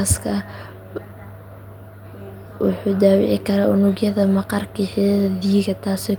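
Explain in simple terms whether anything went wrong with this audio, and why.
No faults can be heard.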